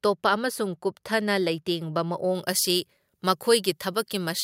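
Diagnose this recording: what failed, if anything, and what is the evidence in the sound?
Pre-emphasis left on, at the playback de-emphasis stage. From 2.35 s to the end, just after "ꯇꯣꯞꯄ ꯑꯃꯁꯨꯡ ꯀꯨꯞꯊꯅ ꯂꯩꯇꯦꯡꯕ", the speech turns thin, bright and sibilant. At 10 kHz the treble sits about 13 dB above 1 kHz. That fits an FM 75 µs boost whose matching cut was skipped.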